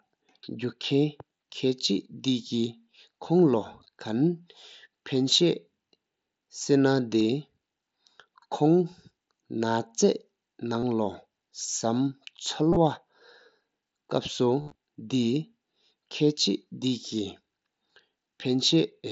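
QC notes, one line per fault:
1.36–1.38 s, 7.2 s, 10.80–10.83 s, 12.71–12.76 s, 14.61–14.75 s: concealed Bluetooth headset packet loss. Lost headset packets, each fitting a 7.5 ms frame, were filled by repeating the closest-matching recent waveform. The lone 7.2 s gap is nearly hidden. Longer runs, up to 60 ms within the 180 ms patch at 14.6 s, give a level buzzy tone with a warble on recovery. The waveform shows copied cycles with a flat envelope, and the spectrogram shows steady horizontal harmonic stripes.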